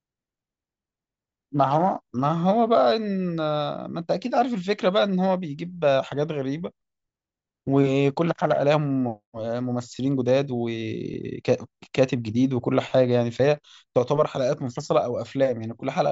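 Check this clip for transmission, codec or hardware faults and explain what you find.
Checking this clip turns up nothing to explain, as no faults can be heard anywhere in it.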